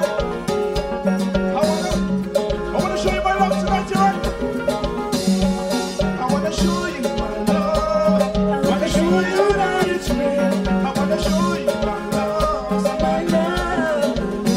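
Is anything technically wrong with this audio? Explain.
Yes. Channel delay (comb filtering) runs through the whole clip. One channel arrives around five milliseconds late, and the mono sum cancels at evenly spaced frequencies, starting near 100 Hz. The sound is hollow and phasey, with fixed notches in the spectrum.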